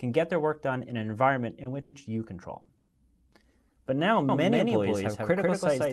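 There are two short stalls from a late packet, at 1.63 s and 2.61 s. In each one the sound just before it gets held a little too long, about 20 ms the first time and about 40 ms the second, with a slight buzz or dip. A packet turned up late, the jitter buffer ran dry, and the receiver stretched the last bit of sound until the packet arrived. Then it picked up exactly where it left off, so nothing is lost, just a small hiccup in timing. There are also two longer call audio freezes, from 1.81 to 1.96 s and from 2.77 to 3.00 s. Here the last sound is drawn out into a fading buzz or hiss for roughly 120 ms and 110 ms, without dropping to silence, before the audio carries on from where it stopped. The likely cause is packets getting held up in transit long enough to empty the buffer, which pushes a gap into the timeline rather than cutting anything out. From 4.29 s to the end there's a doubled audio track: a second, full-band copy of the same sound sits around 150 ms behind the first at about the same level. 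It cuts in abruptly, with no reverb tail or room colour. It's likely a second capture path running slower, or an edit that left two copies out of step. The top end stops around 12 kHz, which is what the Opus call codec does.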